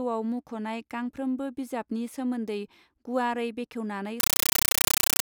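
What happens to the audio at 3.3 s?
Nothing goes wrong at 3.3 s; the speech carries on through that point without any break, glitch or change in level.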